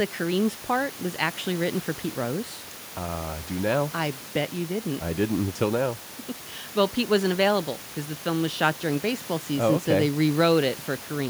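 Nothing goes wrong anywhere in this speech recording; the only thing under it is a bit of room noise sitting about 19 dB below the talking, and that's just the space the microphone was in.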